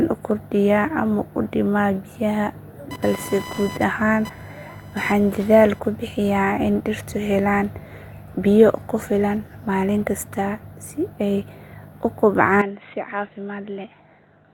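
From 2.91 to 5.80 s, computer activity noise: processor or graphics load disturbed the shared audio ground, adding a buzzing chirp pulsing near 1 kHz, roughly 15 dB below the speech. At 12.61 s, just after "kasta si ay u", the input was likely switched to a poorer device, so the speech drops about 10 dB and turns dull, with nothing above 4 kHz through the end.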